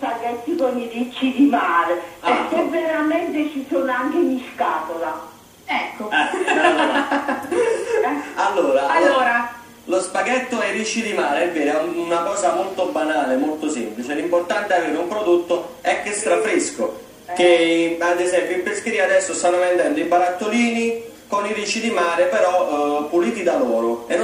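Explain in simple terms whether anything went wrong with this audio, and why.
Nothing went wrong with this audio, because no technical faults can be heard anywhere in it.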